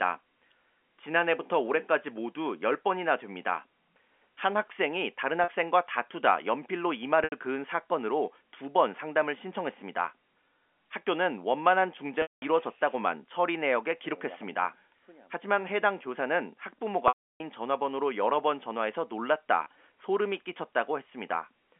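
Packet loss with pitch repetition interrupts the speech five times. At 5.44 s, 40 ms is lost. At 7.24 s, 80 ms is lost. In both cases the receiver repeats the last pitch period to fill the gap, which sounds like a briefly held, buzzy note. At 12.22 s a 200 ms loss and at 17.08 s a 320 ms loss last longer. The repetition fades into silence over about 50 ms, then speech cross-fades back. At 19.64 s a tiny buzz marks a 20 ms loss.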